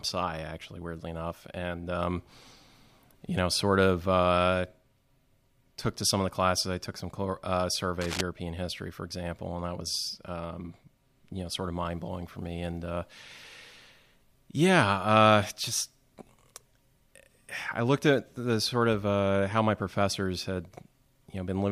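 At 8.01 to 8.21 s there's a burst of cable scratch noise, harsh scratchy rustling only slightly below the speech, likely from a worn connector or cable shifting.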